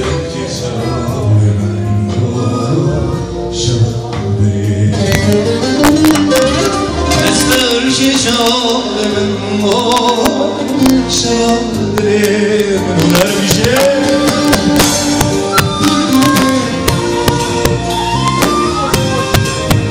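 Integer overflow runs through the whole clip: the signal is driven about 7 dB past the integer limit, so the few peaks that exceed it, well under one percent of samples, wrap to the opposite extreme instead of being limited. Each wrap is a violent crack, harsher than clipping, seen as large vertical jumps on the waveform and broadband vertical streaks on a spectrogram.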